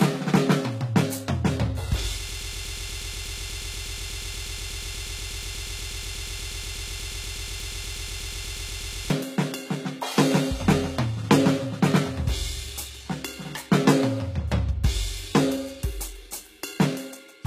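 From the start the music has a gritty, metallic top end: cymbals and other bright sounds shimmer artificially, and nothing reaches above 14.9 kHz. The damage is plainly audible and is most likely HE-AAC compression, where only the lower spectrum is coded and the treble is rebuilt by copying lower bands upward under a coarse envelope. Harmonics therefore fail to line up across the crossover, which fits a very low bitrate of around 20 kbps.

At 2.29 s the music catches and stutters. A fragment of about 0.12 s repeats back to back, 56 times, until 9.10 s, producing a rapid, mechanical chatter in place of the music. This is a broken-record loop, likely caused by the player, encoder or stream stalling and resending the last fragment it held. The music that should have played across those nearly seven seconds is lost.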